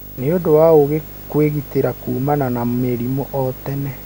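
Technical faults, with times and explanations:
Throughout: video or display buzz. A screen or video feed couples into the speech path, adding a 50 Hz field-rate buzz with hash above it, roughly 20 dB under the speech, and a thin 15.6 kHz line-rate whine; spectrogram shows stacked 50 Hz harmonics plus a steady high line.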